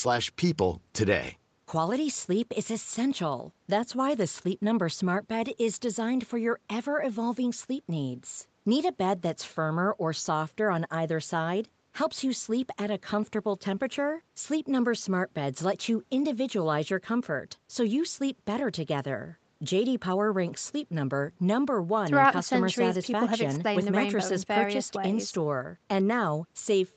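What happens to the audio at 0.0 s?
At 0.0 s the speech is intact, with no fault at that moment, only the expected trimming of the lowest bass from the call's microphone processing.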